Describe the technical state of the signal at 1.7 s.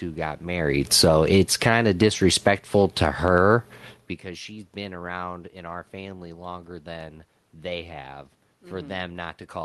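At 1.7 s the speech is in the middle of an automatic gain falling event that runs from 0.78 to 4.06 s. The gain control judged the input too loud, or its background noise too strong, and is pulling its gain down by about 8 dB over that span. The level sinks steadily rather than dropping at once. The room noise underneath sinks with the speech, which marks this as a gain change and not a talker moving away.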